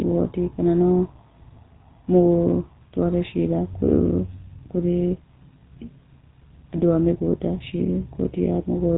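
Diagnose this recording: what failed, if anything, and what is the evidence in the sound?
Buzzy, gravelly roughness runs through the whole recording, with nothing above 4 kHz. The culprit is the GSM full-rate codec at the codec stage, consistent with 13 kbps pulse-excited vocal-tract modelling.

A brief squawk and pop at 6.75 to 6.79 s comes from GSM bit errors on the network link. Corrupted filter, pitch or gain values distort roughly two decoder frames.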